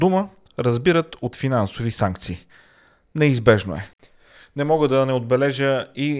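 No technical faults can be heard anywhere in the speech recording, and the signal holds steady across its whole duration.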